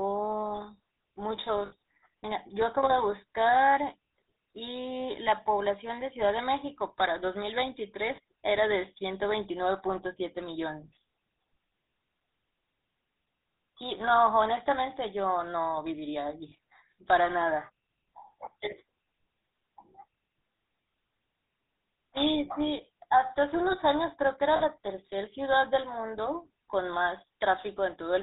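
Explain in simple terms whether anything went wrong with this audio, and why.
The whole recording carries the GSM full-rate codec sound, the one used by early mobile phones. It rebuilds the voice from a simple model of the throat and mouth, driven by a coarse train of pulses, and discards everything above 4 kHz. The result is a buzzy, gravelly roughness on every syllable. That grit sets it apart from a plain phone-band filter, which would sound muffled but still smooth.

There are four short moments of lost GSM frames: 1.66 to 1.73 s, 8.16 to 8.19 s, 16.50 to 16.53 s, and 24.56 to 24.62 s. The missing stretches last about 60, 20, 20 and 40 ms. In each, the decoder kept reusing the settings of the last good frame, so the voice briefly freezes into a rough, metallic ring instead of dropping out. A true dropout would go silent or click.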